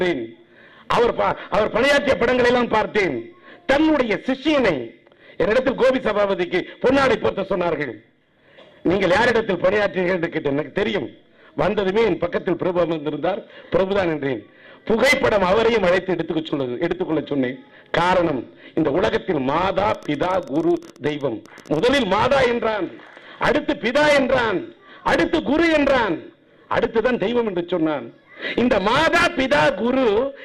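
From 19.90 to 22.14 s, a train of clicks, about 17 per second and unevenly spaced, shows as thin vertical spectrogram lines, likely from nearby interference.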